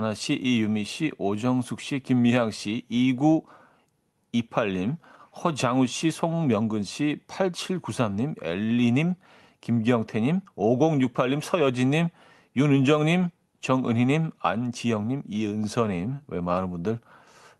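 No technical faults can be heard in this speech.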